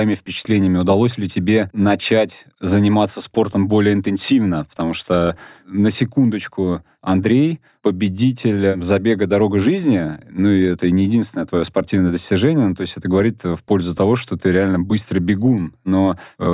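No technical faults can be heard anywhere in this recording of speech. Nothing calls for a time or a value.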